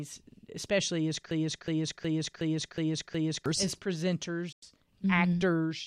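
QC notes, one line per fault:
1.31–3.46 s, broken-record loop: just after "especially as", a 0.37 s fragment repeats six times back to back, likely a stalled player resending its last buffer.
4.52–4.63 s, digital broadcast dropout: the sound fades out over 3 ms into a 96 ms silence, which fits three corrupted frames being muted until clean ones arrived.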